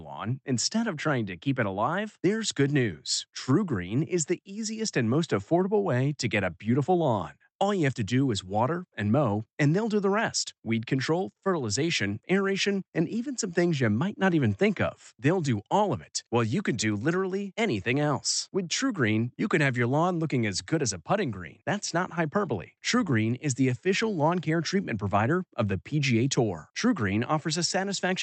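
Nothing here points to a fault: the speech comes over a WebRTC call path doing just what it should, with the Opus coding topping out the highs at around 8 kHz as that path normally would.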